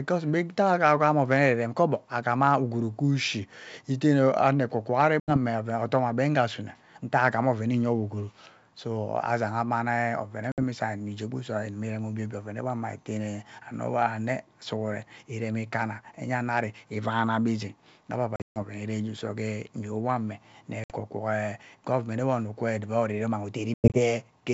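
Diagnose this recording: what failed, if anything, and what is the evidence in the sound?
Network stage: packet loss on an ADPCM call. Hard-edged silent holes follow "ekwo kwo ari" at 5.20 s (80 ms), then at 10.52, 18.36–18.58, 20.84 and 23.74–24.00 s. On the waveform they appear as flat silent runs, and on the spectrogram as full-band vertical blanks. Each is followed by slightly distorted speech while the decoder's predictor and step size resynchronise with the sender's.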